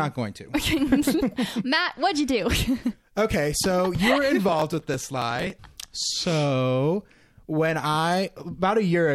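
From 4.49 to 5.68 s, just after "so you were", the processor falls behind and misses a long run of very short buffer deadlines, skipping each one. This processor overload crackle sounds like a gritty, tearing burst over the speech, consistent with dozens of tiny gaps.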